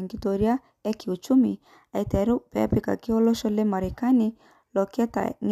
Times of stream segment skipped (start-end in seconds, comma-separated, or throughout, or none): none